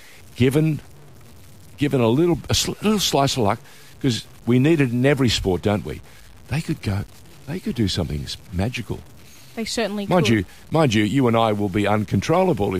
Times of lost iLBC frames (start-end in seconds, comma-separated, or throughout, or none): none